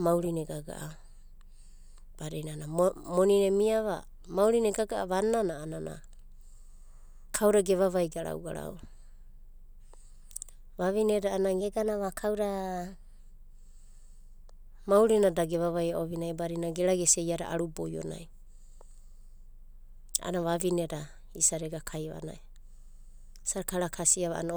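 From 11.61 to 13.19 s, the speech jumps up in pitch and rushes forward. This is a wrong sample rate fault. The samples play back faster than they were captured, with no conversion between the two rates. Speed and pitch rise together. The passage runs about 1.09 times too fast and sits about 1.5 semitones high. That ratio fits 44.1 kHz audio played at 48 kHz. The voice sounds slightly high and hurried.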